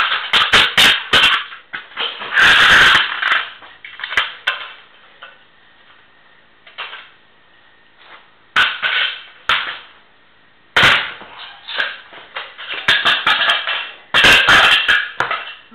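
A time-stretched section runs from 0.0 to 1.96 s, where the audio plays about 1.74 times faster than the rest yet keeps its pitch, sounding rushed. Software likely squeezed it to fit a length by dropping short pieces.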